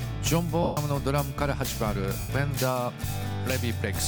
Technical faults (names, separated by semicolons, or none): lost LE Audio frames; repeated buffer